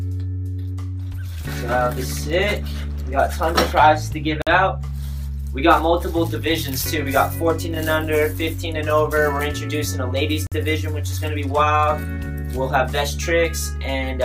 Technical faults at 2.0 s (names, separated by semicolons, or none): none